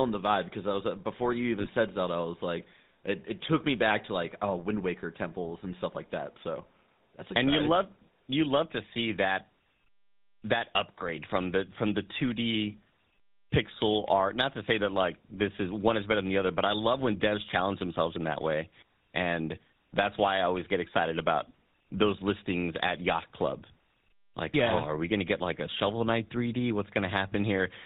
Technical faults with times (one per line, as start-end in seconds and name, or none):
0.00-27.86 GSM full-rate codec
1.60-1.67 lost GSM frames